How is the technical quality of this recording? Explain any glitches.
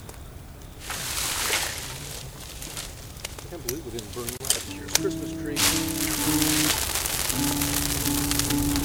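There is one glitch. At 4.37 to 4.40 s, a gap at a join of encoded pieces opens a silence of about 30 ms with smeared edges. It comes from encoder start delay and last-frame padding left in when separately encoded pieces were joined. Unlike a dropout, the sound resumes exactly where it stopped.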